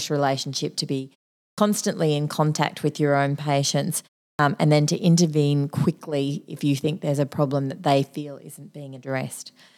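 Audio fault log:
1.54–1.58 s and 4.35–4.39 s, clipped start after a pause: after silences of 0.47 s and 0.35 s, the output wakes late, swallowing about 40 ms, so "in contact with your" and "and then to intervene" begin abruptly. Unlike muted pauses, actual speech onset is lost.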